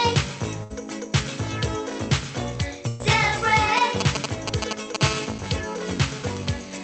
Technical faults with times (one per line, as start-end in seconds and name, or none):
0.63-0.72 burst of packet loss
2.88-3.01 burst of packet loss
3.77-4.96 GSM signalling bursts
5.01-6.83 GSM phone buzz